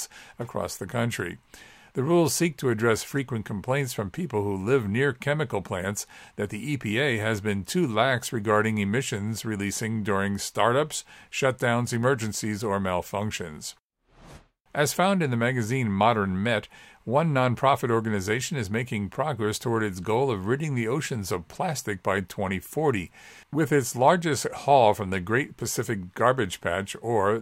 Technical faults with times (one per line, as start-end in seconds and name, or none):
none